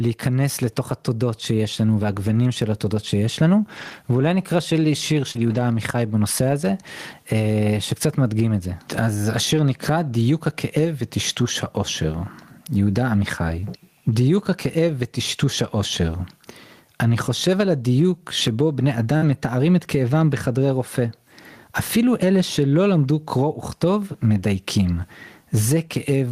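It's a speech clip, and the whole thing sounds squashed by gain pumping. The level swings by roughly 15 dB, so loud and quiet passages end up sitting close together. The likely cause is input gain set far too high for the microphone, with a fast limiter or compressor clamping down on each loud sound. On top of that there are network faults. There are four spots of lost packet rebuilt from error correction, at 2.01–2.03 s, 3.77–3.91 s, 5.35–5.61 s and 19.21–19.35 s. At each one the decoder played the low-bitrate backup copy carried in the following packet, so nothing drops out, but those stretches turn rougher and noisier for about 20 ms, 80 ms, 140 ms and 80 ms respectively. The lengths point to a single 20 ms frame at the first spot and runs of several frames at the others. At 5.31–5.37 s there's a short concealed packet loss. About 40 ms of audio never arrived, and the receiver bridged it with around 35 ms of extrapolated sound before blending back in, so you hear a brief smear or wobble. 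That runs straight into the rebuilt stretch that follows. At 19.17–19.23 s there's a burst of packet loss. The receiver kept the last sound going for roughly 45 ms and faded it as a held buzz or hiss, then resumed with about 40 ms of the real audio missing, and that runs straight into the rebuilt patch at 19.21 s.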